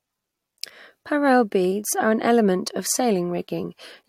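No technical faults can be heard anywhere in the recording; the signal holds steady and continuous throughout.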